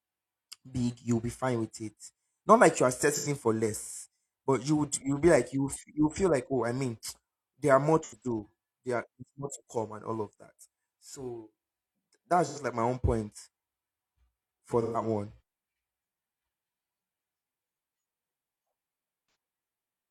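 AAC frame loss with concealment hits the speech at 3.14–3.28, 8.03–8.24, 12.45–12.59, 14.81–15.01 and 19.26–19.35 s. The decoder reuses the last good spectrum, producing brief smeared, phasey patches. On a spectrogram these show as flat horizontal streaks. The longest, about 128 ms, fits three lost frames.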